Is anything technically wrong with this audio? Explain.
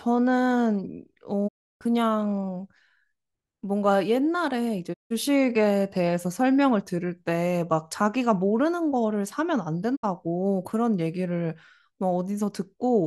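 Yes. Digital broadcast dropouts occur at 1.47–1.83 s, 4.92–5.12 s and 9.95–10.05 s. Each time, the receiver stopped getting valid frames and muted with a 20 ms fade, producing holes of 320, 160 and 64 ms. Those lengths fit runs of 32 ms frames. The speech then resumes further along, and what was sent during each hole is gone.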